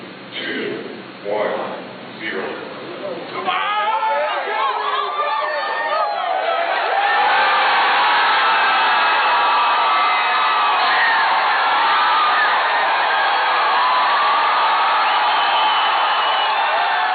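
No technical faults were found anywhere in the audio.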